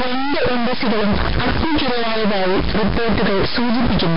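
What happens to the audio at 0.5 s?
At 0.5 s you're hearing two faults that run through the whole clip, not something specific to that moment. The first is a stuck bit, likely from a data line or converter pinned at 0 or 1. Roughly half the samples get pushed off by that bit's fixed amount, following the waveform, so the speech carries added noise or buzzy distortion that also leaks into the quieter gaps.

The second is Nellymoser compression, the Flash microphone codec, and the damage is heavy. It sounds like it's coded at a low fixed rate, which fits a stream of about 22 kbps. Nothing gets through above 5.3 kHz, and the bands the codec starves are filled with noise. That leaves the speech smeared and underwater-sounding with a hissy, rough halo, and this codec is the likely cause.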